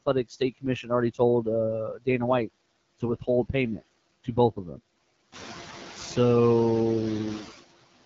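It's a short speech clip, and two problems run all the way through it. First, there are noise suppressor artifacts: the suppressor pulls the steady background down by about 19 dB frame by frame, so the noise floor ducks in the pauses and swells back up under the talking. Second, it's gone through the AMR wideband (HD Voice) codec, and the damage is plainly audible. There's nothing above about 7.2 kHz, and the top sliver is synthetic noise rather than real detail. The roughness and rasp in the voice fit one of the low AMR-WB modes, around 8.85 kbit/s, where the pulse-driven model can't track the voice cleanly. On top of that, the suppressor bites into the speech itself twice. Between 0.29 and 0.65 s, roughly a tenth of a second of sound gets pushed down by about 17 dB. At 1.96 to 2.07 s, a bit goes down by about 19 dB. Both spots sound swallowed or faint, because the suppressor mistook low-level speech for background and turned it down along with the noise. 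The room noise itself steps up by about 11 dB around five and a half seconds in and sits roughly 13 dB under the voice after that, but that's just the room, not a system fault.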